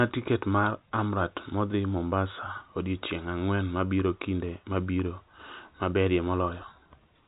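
No technical faults are audible in this telephone speech.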